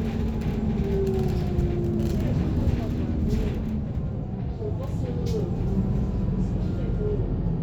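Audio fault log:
The signal carries these sounds with no technical faults present anywhere in the recording.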